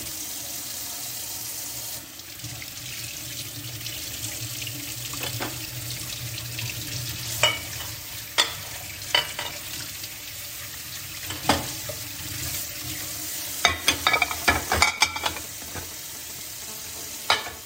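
A nearby 2G phone on a call pulsed at 217 Hz into the audio circuit, adding GSM phone buzz from 16.68 to 17.61 s: a steady, raspy drone about 21 dB below the sound.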